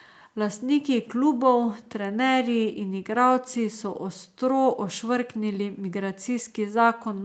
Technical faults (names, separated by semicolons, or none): none